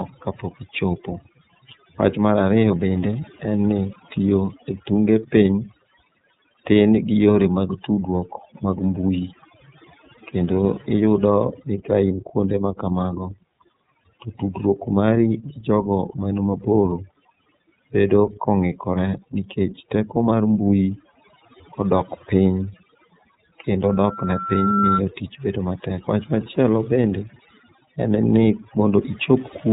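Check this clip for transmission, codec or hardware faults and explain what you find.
Three faults stand out, two running through the whole clip and one short event near the end.

Overdone noise removal runs throughout. The denoiser is pulling individual frequency bands down whenever they sit near its noise estimate, and the quieter parts of the speech go too, so the background drops and breaks up into twinkly specks.

The iLBC codec is also there the whole way through. It's narrowband, with nothing getting past about 3.8 kHz, and each 30 ms frame's excitation is coded on its own, which fits its 13.33 kbps mode. The damage is plainly audible: dull, slightly rough, synthetic-edged speech.

A loudspeaker feedback squeal runs from 23.87 to 25.02 s, just before "tich bedo". A mic is picking up its own speaker, and at 1.4 kHz the loop gain tops one, so that tone feeds itself. It swells over about a second to roughly 5 dB above the speech.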